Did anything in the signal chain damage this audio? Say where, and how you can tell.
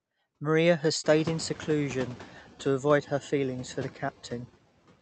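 Yes. The damage sits in call processing: the noise suppressor is catching up. The room noise jumps by about 21 dB at around one second, and from 1.04 s to 2.28 s it comes through with too little reduction, then sinks by about 5 dB over those 1.24 s, settling just before "to avoid her feelings". The suppressor's noise estimate lagged the sudden rise. Unlike compressor pumping, only the noise floor moves. The speech level stays put.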